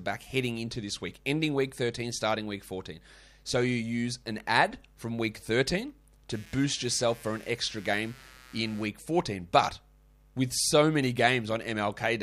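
A speech recording with a buzzing, chirping layer from 6.3 to 8.85 s, pulsing at around 150 Hz some 25 dB below the voice and unrelated to it. This is computer activity noise: processor or peripheral load shifting the shared ground of the audio circuit.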